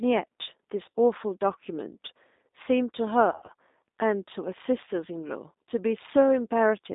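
It's a speech clip that sounds like a call carried over the G.729 codec throughout. The audio sits in a narrow line band of about 250 Hz to 3.7 kHz, and it has that slightly rough, synthetic edge you get when a codec rebuilds the voice from a filter and a few pulses, which fits an 8 kbit/s G.729A link. There are also two spots of VoIP packet loss concealed by the speech codec. The first, from 0.90 to 0.94 s, is a 40 ms gap that the decoder papers over by stretching the last sound into a brief buzzy tone or coloured noise that fades. The second, from 3.32 to 3.51 s, is worse, with about 100 ms missing in bits spread over 160 ms and the longest run at 60 ms. The voice goes weak or distorted there and takes a moment to recover, because each rebuilt frame leans on the one before.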